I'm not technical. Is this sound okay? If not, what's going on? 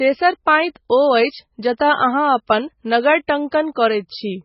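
No. MP3 compression damage runs through the whole clip. The treble stops at about 5.6 kHz, so the speech sounds dull, and the quiet detail swirls and turns watery. This is likely from saving the file at a very low quality setting.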